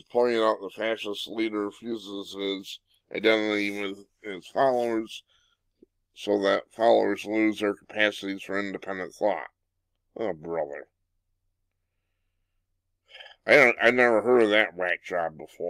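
A call bitrate drop runs from 1.61 s to 7.91 s. The connection's bandwidth estimate fell, so the encoder had far fewer bits to spend and coded the audio more coarsely. The sound turns rough and watery, worst for about 2.7 s, which fits a fall from roughly 48 to 17 kbps.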